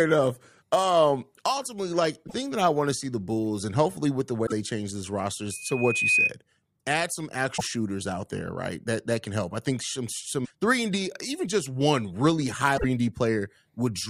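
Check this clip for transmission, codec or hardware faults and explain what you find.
Two kinds of fault are present in this speech clip: repeated damage in the compressed stream and one burst of loudspeaker feedback.

Damaged data in a compressed stream occurs at 2.24–2.34 s, 4.43–4.52 s, 7.54–7.61 s, 10.41–10.51 s and 12.74–12.84 s. Corrupted bytes make the decoder misread frames and lose sync until it finds a valid header, so each spot comes out as a brief chirp or squawk.

A loudspeaker feedback squeal runs from 5.50 to 6.32 s. A microphone is picking up its own loudspeaker, and at 2.5 kHz the loop gain exceeds one, so that tone feeds on itself. It swells over roughly 0.7 s into a piercing whistle a few decibels above the speech.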